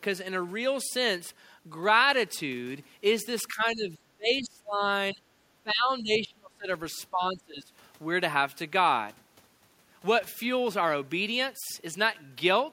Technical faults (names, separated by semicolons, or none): speech suppressed in double talk